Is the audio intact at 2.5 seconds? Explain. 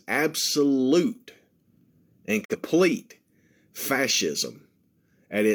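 No. From 2.43 to 2.56 s there is a digital broadcast dropout. The receiver lost a frame of the signal, or one failed its checksum, and muted until valid frames resumed. The gap fits a single lost frame of about 43 ms. The sound fades out over 20 ms, drops to silence, then returns, leaving a brief hole in the speech. A waveform shows a short taper to a flat line, and a spectrogram shows a thin, fully blank vertical band.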